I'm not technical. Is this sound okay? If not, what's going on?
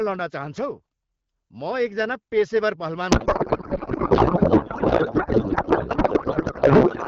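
No. From 3.11 s to the end, a codec payload misread occurs: the receiving end unpacks the bits in the wrong layout, so clear HD Voice turns into garbled, warbling noise.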